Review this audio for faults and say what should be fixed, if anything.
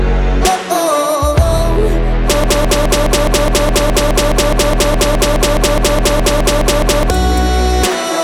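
A broken-record loop runs from 2.44 to 7.10 s. A 0.21 s fragment repeats exactly, back to back, 22 times, and the audio that belonged in that span never plays. The likely cause is a stalled player, encoder or stream resending the last fragment it held.

To prevent this, detect the stall upstream and output silence or a flagged gap instead of replaying the buffer.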